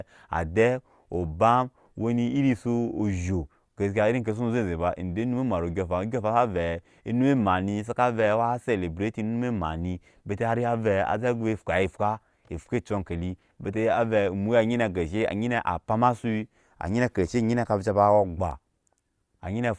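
No technical faults are audible anywhere in the speech, so there is nothing to flag.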